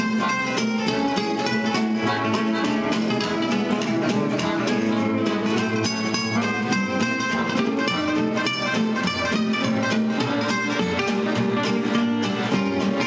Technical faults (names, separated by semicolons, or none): none